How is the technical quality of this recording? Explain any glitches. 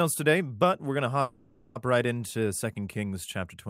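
The recording has one clear glitch, a call audio freeze from 1.21 to 1.77 s. The speech stalls for about half a second: the last sound is drawn out as a fading buzz or hiss rather than dropping to silence, and then the talker carries on exactly where they stopped. That pattern likely comes from packets being delayed in transit until the receiver's jitter buffer ran dry. The receiver papered over the wait with roughly 540 ms of synthetic sound, so nothing is lost, but everything after it arrives about 540 ms later.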